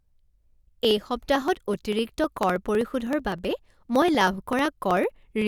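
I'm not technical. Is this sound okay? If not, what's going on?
No. Periodic USB or driver dropouts: something keeps interrupting the audio connection and skips a tiny slice of speech roughly every 0.06 s, causing steady ticking from 0.09 to 5.42 s.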